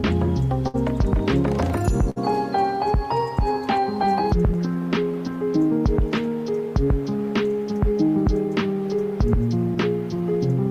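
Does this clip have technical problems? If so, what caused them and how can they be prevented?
Yes. Clock drift between sender and receiver runs through the whole clip: the sender's clock runs roughly 4% slow, so the receiver's jitter buffer keeps draining, producing small, unevenly spaced timing hiccups. Locking both ends to a common clock, or using a receiver with adaptive resampling, prevents this.

Short stalls from a late packet occur at 0.68 to 0.76 s and 2.10 to 2.18 s. Each time a packet arrived late and the buffer ran empty. The receiver held the last sound for about 60 ms, then resumed where it left off, losing nothing. A slightly deeper jitter buffer, or a steadier network path, would absorb delays of this size.

Repeated timing corrections run from 2.04 to 10.33 s. The receiver keeps repeating short pieces to keep pace with the slower sender. Playback runs at 96% speed, and about a third of a second is added in total. 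Correcting the clock mismatch itself, rather than patching it with repeats, removes the need for these edits.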